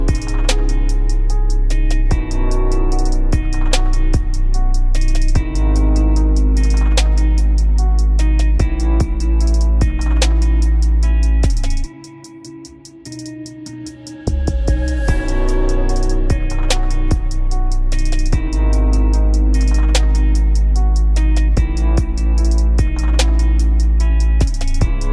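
No technical faults can be heard anywhere in the audio.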